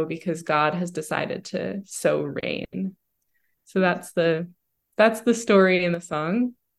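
At 5.94 s the speech drops abruptly by about 7 dB and stays down until 6.13 s: a sudden gain jump, likely a gain setting applied without a ramp. Unlike a fade or compressor action, the background noise falls instantly along with the speech.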